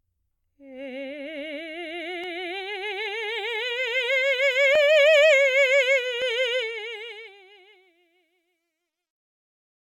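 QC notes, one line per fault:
6.55–10.00 s: truncation distortion on a fade. The music's fade-out drops through too few undithered level steps, consistent with 12-bit truncation, and turns gritty from 7.95 s.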